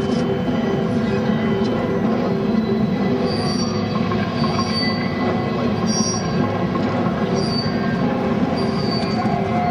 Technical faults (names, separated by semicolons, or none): none